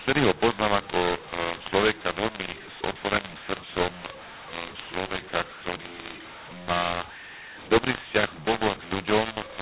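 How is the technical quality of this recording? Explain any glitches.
The technical quality is poor because of a decoding fault across the whole recording. Throughout, mu-law and A-law are mixed up: A-law coded telephone speech is decoded as mu-law, scrambling levels, so speech turns harsh and distorted and pauses fill with noise.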